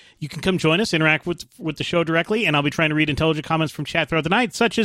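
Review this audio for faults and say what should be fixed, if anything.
Nothing to fix: no audible faults anywhere in the recording.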